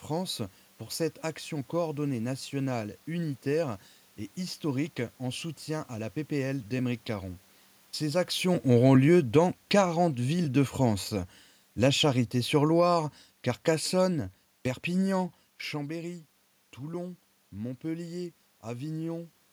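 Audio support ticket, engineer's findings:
Automatic gain falling, 8.35–15.29 s: AGC read input as too loud or its noise as too strong and eased gain down about 7 dB. Speech and room noise sink together, unlike talker movement near 8.0 s.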